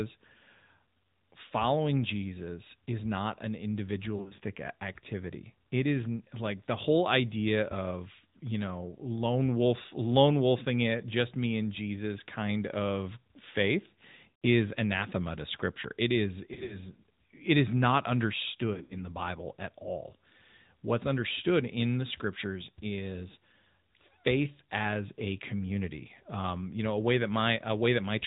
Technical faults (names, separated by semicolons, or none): AMR narrowband mobile codec; lost AMR speech frames